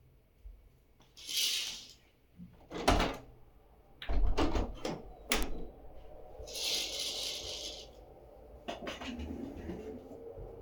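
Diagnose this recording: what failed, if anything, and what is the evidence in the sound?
Two sharp, isolated ticks at 1.68 s and 5.43 s (about -28 and -10 dBFS) are bit error spikes: flipped bits in storage or digital transfer briefly jolt sample values.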